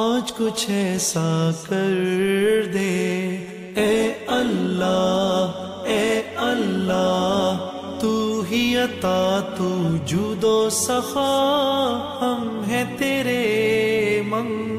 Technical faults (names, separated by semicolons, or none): none